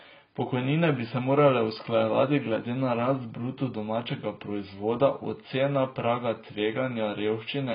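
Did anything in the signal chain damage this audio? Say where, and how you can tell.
Yes: the codec stage, likely low-bitrate AAC compression, throughout the speech. Nothing survives above 5 kHz, and the dull, smeared, warbling texture points to heavy quantisation around 16 kbps.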